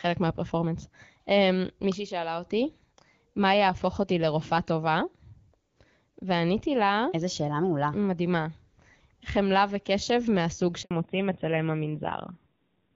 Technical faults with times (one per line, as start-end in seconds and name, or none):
10.83-10.91 handover gap
10.91-12.96 fallback to narrowband